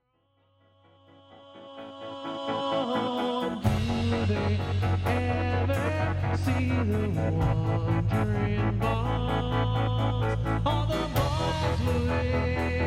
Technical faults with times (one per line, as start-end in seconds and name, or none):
none